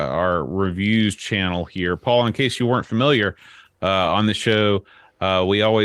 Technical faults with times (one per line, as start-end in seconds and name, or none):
0.69-0.71 lost packet rebuilt from error correction
4.03-4.09 lost packet rebuilt from error correction